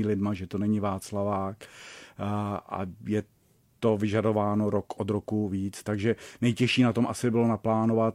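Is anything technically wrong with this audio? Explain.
No, nothing technically wrong is audible in this speech recording; no faults to report.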